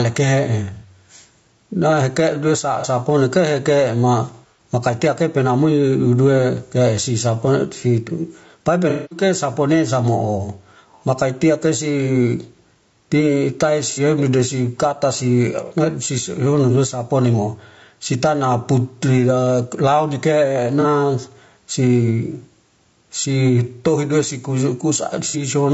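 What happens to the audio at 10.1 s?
At 10.1 s the sound is affected by two faults that run through the whole clip rather than anything specific to that moment.

The first is gain pumping. The level pumps up and down with the speech, with a swing of around 10 dB. The likely cause is input gain set far too high, with a fast compressor or limiter clamping down on every peak, so loud and quiet passages are squeezed toward the same level and the speech sounds flattened.

The second is low-delay AAC compression, of the AAC-ELD type used in video calls. The speech has a rough, grainy texture, with noise filling the gaps between the voice harmonics and a top band that sounds dulled or synthetic. Very short frames resolve pitch poorly and cost extra bits, and damage this plainly audible points to a low bitrate, on the order of 32 kbps.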